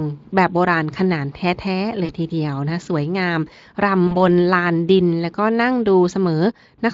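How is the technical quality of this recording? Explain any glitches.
The speech carries two short dropouts from VoIP packet loss concealed by the speech codec, at 2.05–2.11 s and 4.07–4.15 s. Speex coding adds only light colouring. In each dropout, roughly 40 ms of packets went missing. The decoder extended its last sound with falling gain, so the speech briefly stretches into a buzzy tone or coloured noise that fades.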